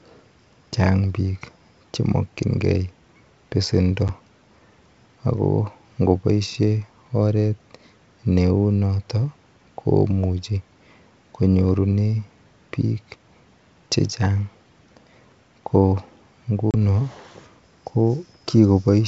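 At 4.08 s and 16.71 s, packet loss on an ADPCM call leaves hard-edged silent holes of 10 ms (about one packet) and 30 ms (roughly three). Unlike a simple dropout, speech returns slightly distorted, because the decoder's adaptive predictor and step size have drifted from the sender's.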